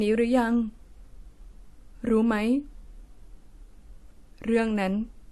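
Throughout, the speech carries layered, mismatched compression artefacts, likely from transcoding between lossy codecs, suggesting WMA then AAC-LC. On a spectrogram, nothing appears above 12.4 kHz.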